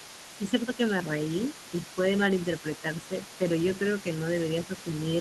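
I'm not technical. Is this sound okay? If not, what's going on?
No. A second, quieter voice sits behind the main speaker for the whole clip. This is the other side's voice leaking through. The talker's device likely played the other person on a loudspeaker. The echo canceller didn't fully remove it.

There is also speech suppressed in double talk. The main voice briefly dips or thins out between 0.38 and 0.8 seconds. It happens again from 3.08 to 3.13 and from 3.38 to 3.44 seconds. Both sides were likely talking at once, so the echo canceller turned both down.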